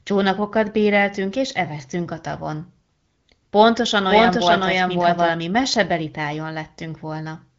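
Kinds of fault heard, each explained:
Doubled audio track: from 4.09 to 5.29 s a second, full-band copy of the speech runs about half a second behind, about as loud as the original, with no decay or room colour, and it cuts in and out abruptly, likely from a second capture path or a misaligned edit.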